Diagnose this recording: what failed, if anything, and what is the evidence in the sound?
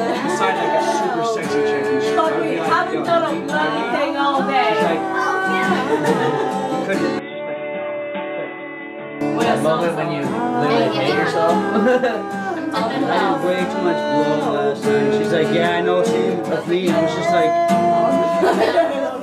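The input likely switched to a poorer device at the driver stage, 7.19 to 9.21 s: audio turns dull, nothing above 3.8 kHz, about 10 dB quieter, with new background noise.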